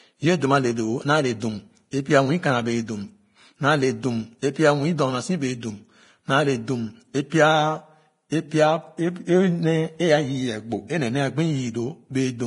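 Throughout, the speech sounds hissy and grainy, with nothing above 10.6 kHz. This is likely heavy Vorbis compression, around 30 kbps, quantising treble detail into noise.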